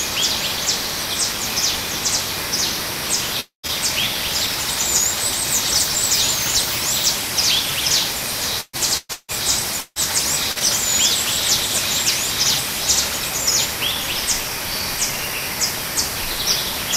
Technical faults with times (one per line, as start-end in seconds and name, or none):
3.40-3.66 long network dropout
8.61-10.64 repeated packet loss (robotic sound)